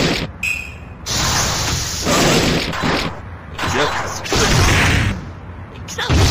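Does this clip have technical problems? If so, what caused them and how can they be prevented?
No, this clip has no technical problems, so there is nothing to prevent.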